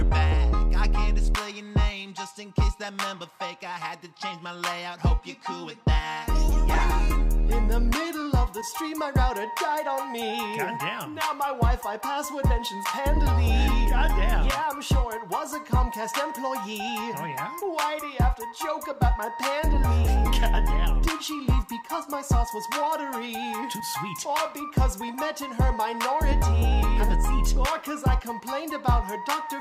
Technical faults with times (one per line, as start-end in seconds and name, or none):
none